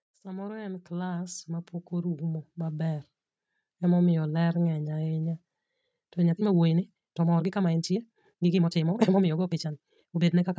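From 0.09 s to 3.07 s the speech shows automatic gain rising: the call's gain control judged the input too quiet and raised its gain steadily, by about 12 dB over roughly three seconds. Voice and background noise swell together, which separates it from a speaker moving closer, where the voice alone would grow. The slow, single upward ramp also distinguishes it from gain pumping, which rises and falls quickly around loud syllables.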